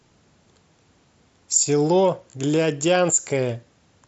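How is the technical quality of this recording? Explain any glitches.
The speech comes across a Bluetooth mSBC headset link, topping out around 8 kHz with just a light touch of that codec's grain, and there aren't any glitches to explain here.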